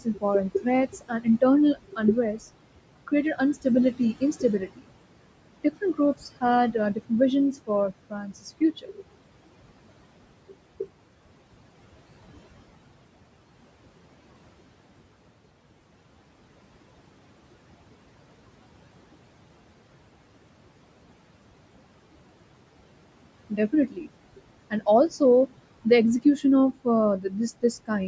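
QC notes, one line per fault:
Throughout: noise suppressor artifacts. The steady room noise, sitting about 15 dB under the speech, is pulled down by about 21 dB in the pauses and lets back up under each phrase, so the background pumps with the talking. Unlike clipped speech, this affects the residue and colour of the noise floor, not the loudness of particular syllables.
0.00–1.42 s, 1.74–2.41 s, 2.79–4.89 s, 5.64–7.11 s, 7.53–9.18 s, 23.5–25.21 s, 26.22–26.86 s and 27.2–27.9 s: speech cut by the noise suppressor. Within each range, short stretches of the speech itself, from a tenth of a second up to about 0.7 s in total, are dragged down by about 15 to 22 dB, deepest around 7.53–9.18 s. The suppressor mistook soft consonants and quiet endings for noise, so they turn faint or swallowed. Unlike a network dropout, the sound fades with the background rather than cutting to silence or a glitch. 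The band stops near 8 kHz, as expected from call microphone processing.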